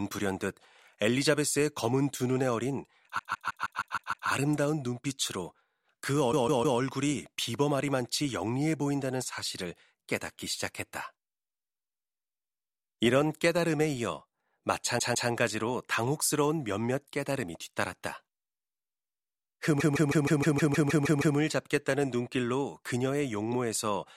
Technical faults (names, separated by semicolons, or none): repeated frames